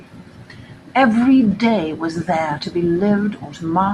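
Nothing in this bit of speech stands out as a technical fault at any point, so there's nothing to pin to a timestamp here.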